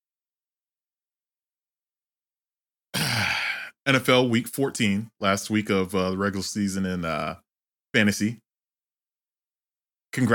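No technical faults can be heard anywhere in this recording.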